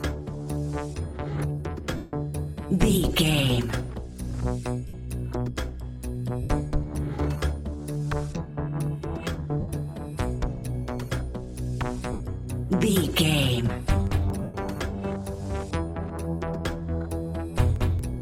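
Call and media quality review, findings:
Lost LE Audio frames at 1.96 s (165 ms), 4.88 s (53 ms), 6.43 s (68 ms), 9.60 s (75 ms), 12.12 s (75 ms) and 14.43 s (113 ms). The source is the Bluetooth LE link. The LC3 decoder conceals each loss by replaying the last spectrum with random signs, so tones blur into a noisy smear and the 1.96 s gap fades toward silence. A hard dropout would instead leave a clean gap or a click. The gap lengths fit 7.5 ms frames.

Lossy compression is light and not a finding.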